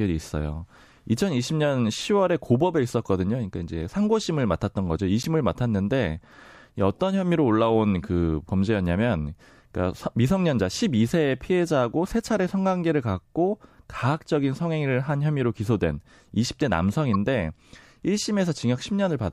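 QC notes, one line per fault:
5.22–5.26 s and 17.13–17.16 s: damaged data in a compressed stream. Corrupt bytes make the decoder misread frames and lose sync for 34 ms and 24 ms.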